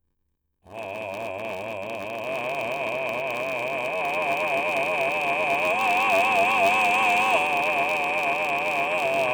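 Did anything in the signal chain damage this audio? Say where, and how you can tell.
Yes, a block size mismatch (padded) at the driver buffer. A 93.8 Hz buzz runs throughout, and the music plays at 0.861 speed at normal pitch. This fits short writes zero-filled into 512-sample read blocks.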